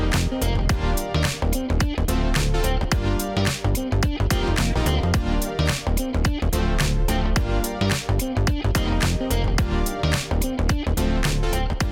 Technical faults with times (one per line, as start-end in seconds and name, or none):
none